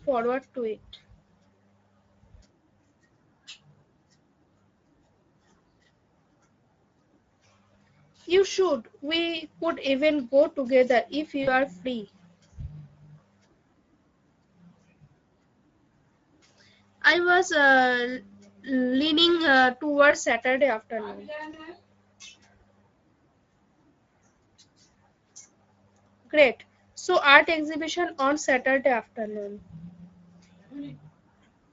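Speech runs through the Speex codec for its whole length at a low-to-middle quality setting, consistent with a rate near 17 kbps, leaving the excitation short of bits, so the voice sounds plainly hoarse and grainy throughout. VoIP packet loss concealed by the speech codec occurs twice: about 40 ms of audio is lost at 11.43 to 11.52 s and about 20 ms at 21.51 to 21.58 s. The decoder repeats its last pitch and filter at falling gain, so each gap becomes a short, fading smear.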